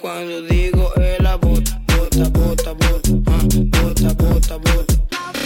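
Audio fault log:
No fault is heard in this audio.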